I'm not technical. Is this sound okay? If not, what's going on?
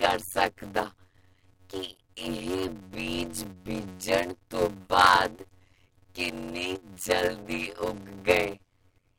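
No. A block size mismatch (padded) runs throughout. Short silent gaps cause a 92 Hz buzz and slow the speech to about half speed.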